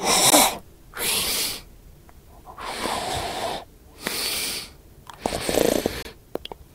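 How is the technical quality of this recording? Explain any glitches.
Two brief dropouts are audible. Block of digital silence at 0.30 s (about 18 ms) and 6.03 to 6.05 s: the audio cuts to silence, likely from a late-filled output buffer, giving abrupt short holes.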